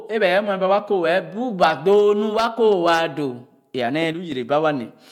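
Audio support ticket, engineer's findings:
One channel drops out, 4.13–4.32 s. Speech level falls abruptly by about 6 dB for roughly 0.19 s, then snaps back. Consistent with one stereo leg going silent before the mono fold-down: shared content loses half its contribution, anything carried only on the lost side vanishes. Likely cause: momentary loss on one channel of the stereo path, such as a loose connector, a dropped channel in the interface, or a routing glitch.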